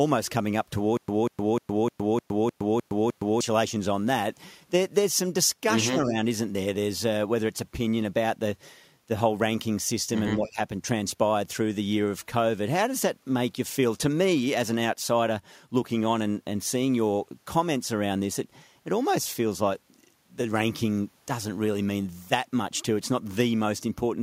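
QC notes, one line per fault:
0.97–3.41 s, stutter with silent gaps: the same 190 ms burst of speech plays eight times at an even pace, each time followed by 114 ms of dead digital silence, so the pattern repeats about every 305 ms. The speech that should have filled this stretch never arrives. This is likely a playback or stream stall, where each retry replays the last buffered fragment and then runs dry before new data comes in.
5.88–6.18 s and 10.35–10.6 s, speech suppressed in double talk: the talker's level sinks for a few hundred milliseconds, by about 10 dB in the first dip and about 15 dB in the second, so the speech sounds pushed back. The likely cause is an echo canceller that, with both sides talking at once, could not tell the near talker from loudspeaker echo and attenuated everything.
10.45–10.5 s, echo leak: a faint, brief copy of the speech trails the original by 152 ms, sitting about 20 dB below it, inside the second suppressed stretch. 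This is likely residual echo from a loudspeaker on the other end that the echo canceller failed to remove fully and sent back down the line.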